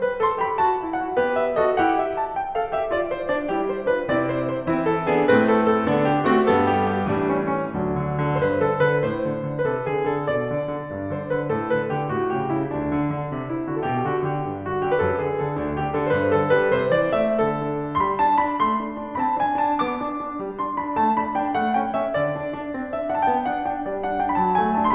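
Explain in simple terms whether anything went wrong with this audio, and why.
Nothing went wrong here: the music runs along without any dropouts, glitches or other technical trouble to point at.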